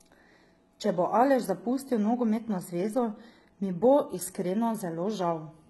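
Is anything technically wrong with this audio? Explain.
Yes. Throughout the speech there is heavy damage consistent with HE-AAC compression. Nothing is present above about 11.8 kHz, and the treble below that ceiling sounds synthetic. The likely cause is HE-AAC v2 at a very low bitrate, around 16 kbps. The codec encodes only the lower spectrum and fills in the top by spectral band replication, copying lower bands upward under a coarse envelope. Because the upper harmonics don't align with the real ones, s sounds come out gritty, metallic or lispy.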